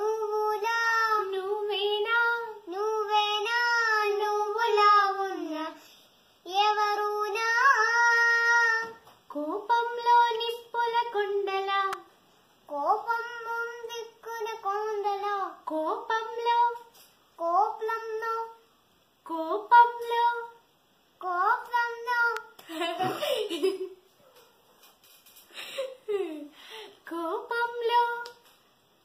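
Electrical switching spikes at 11.93 s and 22.37 s: each is a sharp, isolated snap sitting on top of the sound, the first peaking near -15 dBFS and the second softer, near -20 dBFS, likely arcs from a nearby switch or motor coupling into the audio line.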